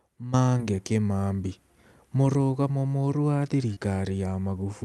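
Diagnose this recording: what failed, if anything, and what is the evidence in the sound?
Short concealed packet loss at 0.57 to 0.64 s and 3.74 to 3.78 s, a network-stage fault: each time about 20 ms of speech arrived too late, and the receiver's concealment extended the preceding sound before blending back, leaving a brief smear, with roughly 10 ms of extra length added at the first.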